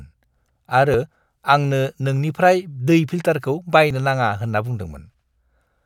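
A speech recording with audio missing between chunks at 0.94 s and 3.91 s. The second skip falls between "दै फिल्टारखौ" and "नाङा होन्ना". Each loses roughly 10 ms, joined with no silence. The likely cause is processing in 1.0 s chunks that drops audio at each handover.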